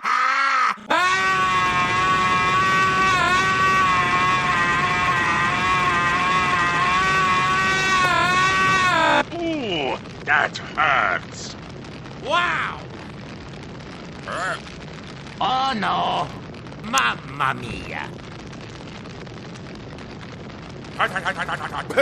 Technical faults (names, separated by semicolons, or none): electrical switching spike